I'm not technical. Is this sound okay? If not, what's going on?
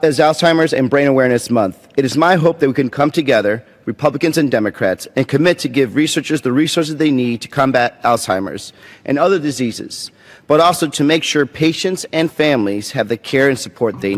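Yes, no faults to hear.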